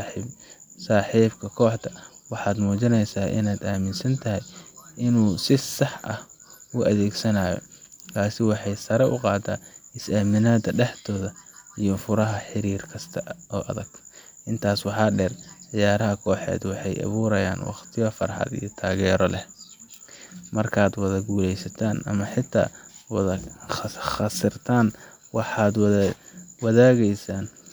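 A speech recording with no audible technical faults anywhere in the signal.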